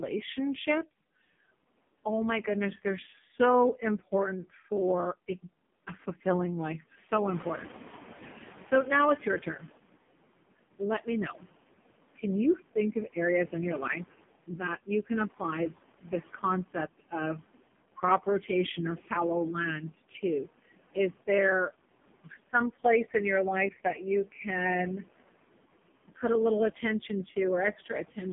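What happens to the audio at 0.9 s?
At 0.9 s the audio carries two faults that run through the whole clip. The first is noise suppressor artifacts. A suppressor judges which frequency bands hold steady noise in each short frame and pulls them down, here by about 18 dB, so the background drops away between syllables and comes back under them. This differs from codec warble because it pumps with the speech rather than following a fixed frame rhythm.

The second fault is the AMR narrowband mobile codec, and the damage is heavy. The line passes only about 150 Hz to 3.5 kHz, and nothing above 3.6 kHz survives. Speech is rebuilt from a vocal-tract model driven by a few pulses per subframe, and the strong buzzy, synthetic quality points to the lowest AMR mode, around 4.75 kbps. Unlike simple low-pass filtering, the voice itself sounds artificial, not just muffled.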